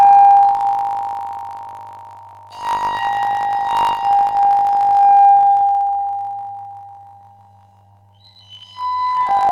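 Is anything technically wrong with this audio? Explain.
Yes. Throughout, planar audio read as interleaved: each 20 ms block plays twice at double speed, giving a robotic 50 Hz buzz, with spectrogram harmonics doubled and waveform segmented every 20 ms.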